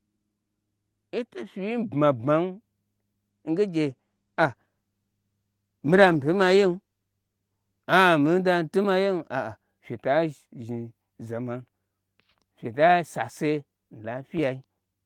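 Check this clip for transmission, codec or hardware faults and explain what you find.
There is one transmission fault, a call bitrate drop, from 3.88 to 7.91 s. The encoder's bit budget collapsed, which fits a fall from around 48 to 16 kbps, so the speech is coded coarsely and turns rough and muffled for about 4 s. Unlike packet loss, nothing drops out: the degradation is continuous and lifts when the bitrate recovers, back to the brighter 12 kHz band of the Opus call path.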